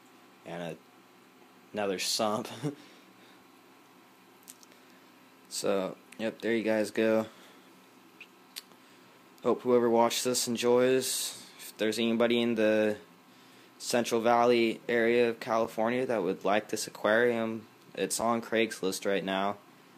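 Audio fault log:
15.64 s, block of digital silence: a 5 ms stretch of samples drops to silence and returns with no fade, so the abrupt edges are heard as a single tick. The waveform shows a brief near-flat dip; the spectrogram shows a thin vertical broadband streak.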